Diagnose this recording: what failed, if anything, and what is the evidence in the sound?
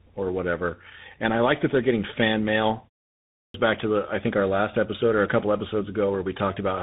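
Codec stage: tandem speech coding throughout. The sound is rough, muffled and warbly, with nothing above 3.8 kHz. It crossed GSM full rate, then G.711 mu-law, then CVSD. With two speech coders in a row, the second re-encoded the first's artefacts, compounding the degradation.

Playback stage: clipped start after a pause at 3.14 s. After a 0.33 s gap, the next sound bursts in abruptly, missing about 0.4 s until 3.54 s. The output path evidently slept during the pause and woke too late.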